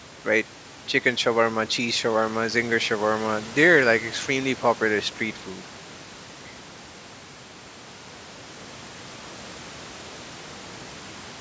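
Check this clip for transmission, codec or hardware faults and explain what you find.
Nothing here points to a transmission, codec or hardware problem: the speech simply carries the usual call microphone processing, with nothing above 8 kHz, and a bit of room noise sitting about 22 dB below the voice, both of which are just part of how it was captured.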